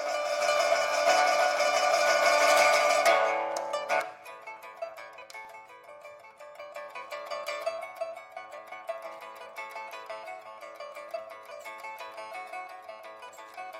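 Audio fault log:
5.45 s, dropped buffer (overrun): a single jump where the sound skips straight ahead with no silent gap, unlike a dropout. Likely the samples were overwritten before being read, losing roughly a millisecond and a half and butting both sides together.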